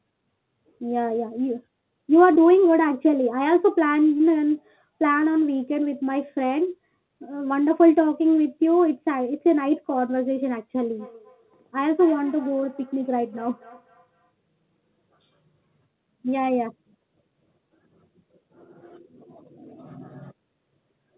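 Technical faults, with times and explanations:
2.34 s and 4.18 s, short concealed packet loss: about 20 ms of audio failed to arrive in time at each point, and the receiver bridged the gap by extending the preceding sound, carrying its pitch forward where it was voiced or substituting shaped noise where it was not, before crossfading back into the real signal. The result is a brief smear or wobble in the speech, and a short consonant at either spot can drop out.
10.82 to 14.33 s, feedback echo between two devices: a second device in the same room is playing back what this microphone sent, and the microphone captures that playback again. The local echo canceller only removes what its own device outputs, so the returning sound is left in. The speech recurs at roughly 200 ms intervals, thinner and more ringing with each pass, peaking at about 24 dB below the direct speech. The band-limited, telephone-like character of the call, with nothing above 4 kHz, fits a G.711 mu-law path.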